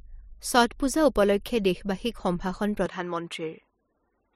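From 2.86 s, after "পূজা উপলক্ষে দেশবাসীক সম্ভাষণ", the speech loses everything above 11.4 kHz and gains a faint new noise floor, likely from the input switching to a poorer device.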